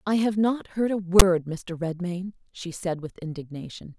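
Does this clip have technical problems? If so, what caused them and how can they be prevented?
Yes. From 1.19 to 1.22 s, file tags played as audio: a block of text tags was read as samples, giving a hard-edged, lopsided rasp that drops into silence where zero padding follows. The sudden square edges set it apart from a dropout. Decoders should skip tag chunks instead of treating them as audio data.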